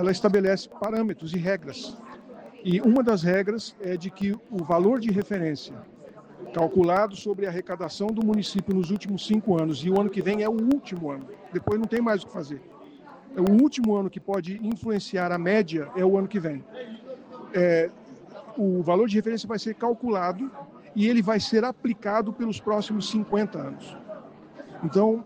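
From 0.09 s to 15.34 s, small ticks sound every 0.125 s, eight per second, whenever signal is present. These are periodic USB or driver dropouts: a background task repeatedly stalls the audio path, and each stall drops roughly half a millisecond to silence.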